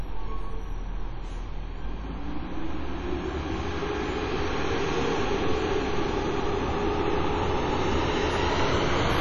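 Everyday sound here, and the whole thing has heavy WMA compression damage, likely from a low-bitrate encode around 32 kbps. Nothing survives above 11.6 kHz, quiet detail gets zeroed, and coarse long-block quantisation leaves a ringing, washy smear with hiss pumping along with the signal.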